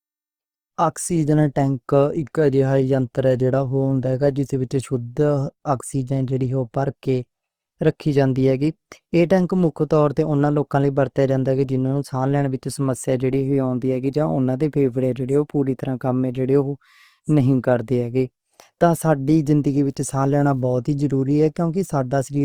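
A speech recording carries plainly audible codec damage from start to finish: the speech sounds rough and grainy rather than hollow or swirly, the signature of likely Opus compression in its CELT music mode, where thin bands are filled with folded or noisy content instead of being left empty. The bandwidth stays full, reaching to about 20.3 kHz, and the degree of graininess fits a rate around 24 kbps. On a spectrogram the upper bands look smeared and speckled with noise-like texture, with few clean gaps. From 19.86 to 20.64 s an unreliable data bit adds a steady crackling fizz, heard through pauses as well as sound, because a marginal data line flips one bit in a random share of samples and each flip becomes a spike of identical height. The waveform shows a scatter of equal-sized needles over that stretch, and the spectrogram shows them as vertical streaks across all frequencies.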